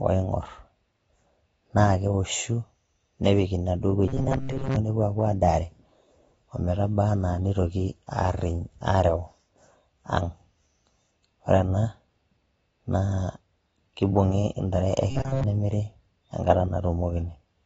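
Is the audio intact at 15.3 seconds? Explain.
No. Robotic sound from repeated short buffers runs from 15.11 to 15.44 s: a rigid metallic buzz near 134 Hz replaces the sound, likely from one roughly 7.5 ms buffer being replayed over and over while the real audio is skipped. Throughout, including here, the audio is dull and smeared with nothing above 7.6 kHz, consistent with AAC compression at a low bitrate, around 24 kbps.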